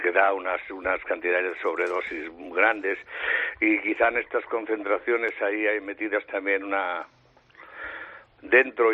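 At 5.29 s there is one sharp click, a thin vertical line across the spectrum. The likely cause is dropped samples: a fraction of a millisecond is skipped, so the waveform jumps. Unlike a dropout, no sound goes missing or silent.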